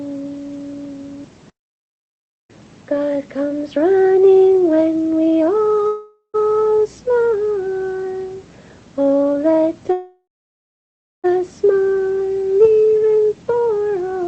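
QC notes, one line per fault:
5.87–6.36 s and 9.92–11.26 s, call audio freeze: the last sound carries on as a fading buzz, then silence (about 70 ms, then about 0.98 s), and resumes where it stopped, 0.46 s and 1.32 s late, likely from delayed packets emptying the jitter buffer.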